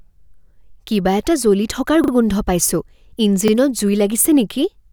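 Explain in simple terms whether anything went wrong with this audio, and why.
A repeated buffer fault occurs twice in this speech. From 2.04 to 2.12 s, one tiny slice of sound plays three times in a row, and at 3.48 to 3.52 s another slice plays twice. Each repeat is about 40 ms long, which suggests a buffer of that size. The next piece of audio arrived late, so the player replayed the last one. You hear a quick stutter with sharp joins, but no sound appears to be skipped.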